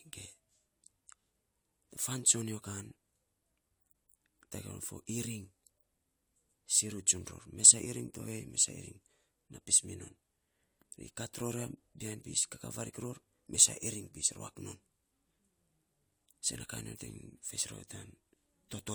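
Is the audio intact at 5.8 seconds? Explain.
Yes, the speech at 5.8 seconds plays through cleanly, with no dropout, click, distortion or other audible fault at that moment.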